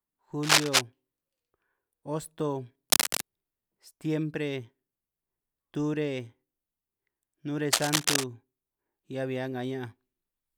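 Cable scratch noise occurs three times in the speech: from 0.43 to 0.81 s, from 2.90 to 3.25 s, and from 7.72 to 8.24 s. Each burst is a dense, ragged rustle laid over the speech. The first is the loudest, around 10 dB above the signal, and the later two sit roughly 5 dB above it. The likely cause is a worn cable or connector shifting, so its contact resistance jumps erratically and injects uneven noise.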